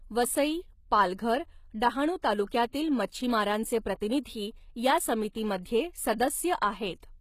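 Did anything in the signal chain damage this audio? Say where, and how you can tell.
Yes, at the codec stage. The whole clip has plainly audible HE-AAC compression, likely at a low bitrate around 20 kbps. Nothing sounds above about 14.9 kHz. The treble is rebuilt from copied lower bands, so sibilants come out gritty and metallic, not natural.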